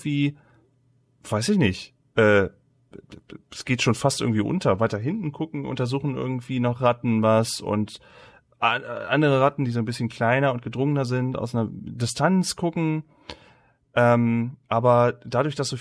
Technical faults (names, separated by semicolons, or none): none